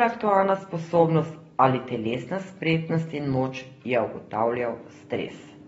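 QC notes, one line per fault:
throughout: likely AAC compression at a low bitrate near 24 kbps. Dull speech, nothing above 7.6 kHz, and warbly, smeared sibilants that a clean low-pass filter wouldn't produce.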